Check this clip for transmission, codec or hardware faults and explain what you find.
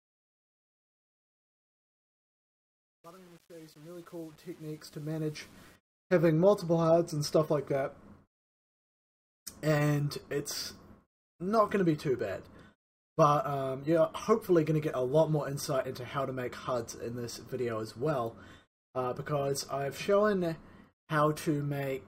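Truncation distortion on a fade runs from 0.0 to 5.76 s, and it is the one fault found. A digital gain or fade stage rounded the signal to too few levels and added no dither, which fits an 8-bit stage. As the level drops toward the smallest step, the waveform collapses into coarse square steps. The result is a gritty, grainy texture in the quiet portion of the fade, heard most clearly from 0.0 to 5.57 s.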